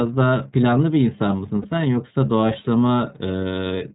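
Throughout the speech the iLBC codec is at work, and its damage is plainly audible. Everything above 4 kHz is gone, so consonants lose their air. The voice has a rough, slightly synthetic grain from coding each frame's excitation on its own. That grain is what separates it from simple narrowband filtering, which would dull the sound without adding roughness. The framing fits the 30 ms mode, which points to roughly 13 kbps.

From 1.62 to 1.65 s, about 30 ms, lost iLBC frames are concealed, most likely a single missing packet. The decoder fills the hole by repeating the last pitch cycle with some noise mixed in. It is heard as a brief held, faintly buzzy vowel rather than silence or a click. Unlike concealment in codecs whose frames depend on earlier ones, the voice snaps back to normal straight after the gap, with no smeared recovery.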